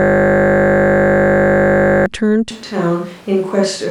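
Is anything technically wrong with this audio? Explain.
Yes, there are two faults.

From the start to 2.06 s there is a system hang loop, already under way when the clip begins. The computer or its audio driver stalled while the sound hardware kept replaying the same ring buffer, so one 20 ms fragment repeats exactly, about a hundred times. Because the loop is so short, it does not come across as a stutter. It is a steady, tonal buzz at 50 Hz.

From 2.51 s to the end, the speech turns suddenly roomy and hollow and loses low-frequency body. The level falls by around 5 dB, and background noise rises to roughly 25 dB below the speech. This is most likely a switch to a distant microphone: the close microphone's signal dropped out and a pickup farther away, such as a camera's, took over. The abrupt onset points to a source change rather than a gradual acoustic shift.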